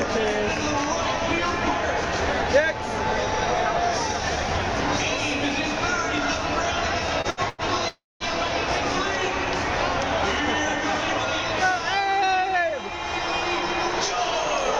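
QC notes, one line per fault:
7.21–7.27 s, 7.30–7.40 s, 7.49–7.61 s: short stalls from late packets. The jitter buffer ran dry, so the last sound was held for 28, 71 and 93 ms, then resumed with nothing lost.
7.88–8.23 s: call audio freeze. The sound is stretched into a fading buzz, then 200 ms of silence, and resumes where it stopped, adding a 318 ms gap. The likely cause is packets held up in transit that emptied the jitter buffer.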